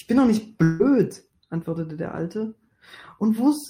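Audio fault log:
0.63–0.81 s, long network dropout: the speech smears into a fading buzzy continuation for about 160 ms, with no silence, then resumes with that stretch missing. The likely cause is a gap in arriving audio that the receiver filled by extending the last sound.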